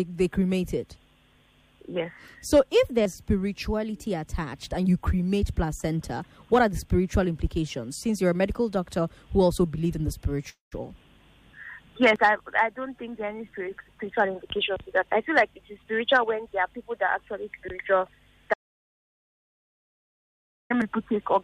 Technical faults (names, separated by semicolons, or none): call audio freeze; jitter buffer speed-up; audio dropout to silence